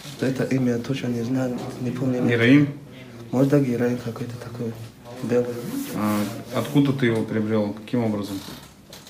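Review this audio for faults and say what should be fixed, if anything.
From 1.27 to 2.37 s the sound speeds up 5.2% and jumps 88 cents sharp, then snaps back: likely a drift correction step. Fixing it means having the clock-matching resampler adjust its rate gradually rather than in one jump.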